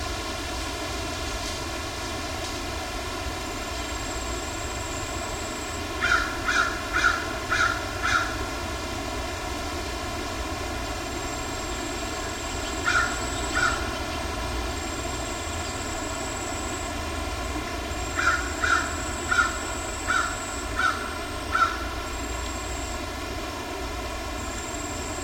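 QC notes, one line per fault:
Throughout: channel delay (comb filtering). One channel trails the other by around 3 ms, and the mono sum cancels shared content at evenly spaced frequencies, with the first notch near 150 Hz. The fixed notches leave the audio hollow and phasey across its whole length.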